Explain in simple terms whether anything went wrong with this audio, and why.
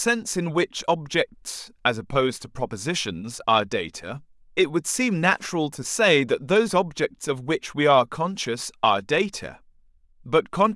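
Nothing went wrong here.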